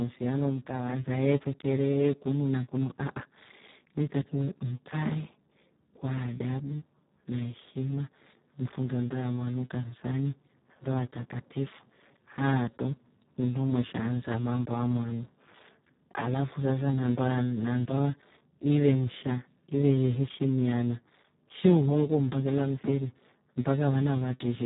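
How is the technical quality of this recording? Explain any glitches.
The technical quality is poor. Speex codec damage runs through the whole speech clip. Heavy low-bitrate coding, which fits about 4 kbps, starves the excitation. Speech sounds hoarse and noisy. Nothing remains above 3.8 kHz.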